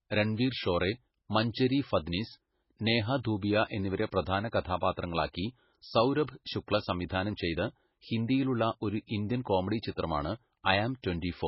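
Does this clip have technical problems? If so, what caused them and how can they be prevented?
Yes. Throughout, the speech sounds watery and swirly, smeared at onsets, with nothing above 5.6 kHz. This is likely heavy MP3 compression, pointing to a very low bitrate around 16 kbps, where the encoder cuts treble and drops weak frequency lines that flicker between frames. Encoding at a higher bitrate, or keeping an uncompressed or lossless copy, prevents it.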